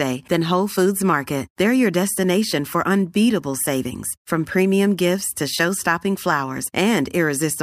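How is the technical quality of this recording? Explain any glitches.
No technical glitches can be heard in this speech recording. There is nothing here that needs explaining.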